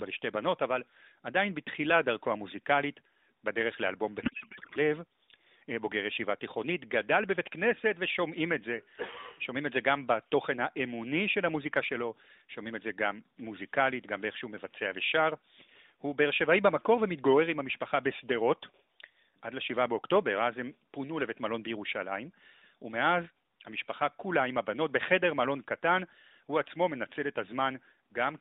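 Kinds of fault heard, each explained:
Codec payload misread: from 4.22 to 4.78 s the speech gives way to garbled noise and warble that barely tracks it, because the AMR frames are unpacked with the wrong layout, which fits octet-aligned payloads read as bandwidth-efficient, scrambling every field.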